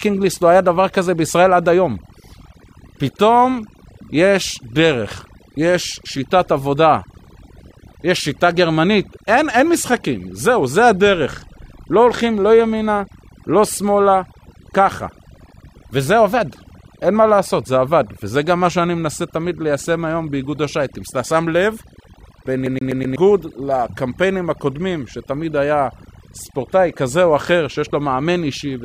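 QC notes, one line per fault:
Throughout: overdone noise removal. The background hiss has been pushed down, but what remains is a scatter of twinkling, chirpy specks where individual frequency bands flick on and off. The quieter detail of the speech has been cut along with the noise. Unlike a plain low-pass or a lossy codec at low bitrate, the damage tracks the noise floor: it is worst in pauses and soft syllables.
22.66 to 23.16 s: CD stuck on one turn. A slice of speech about 124 ms long plays four times in a row, each pass cut off by a brief mute before the jump back. This is the laser repeatedly skipping back to the same point on the disc, as happens with a scratch. What sets it apart from a buffer underrun or a network dropout is that the looped fragment is identical every time and the rate is fast and perfectly even, giving the mechanical stutter typical of a skipping CD.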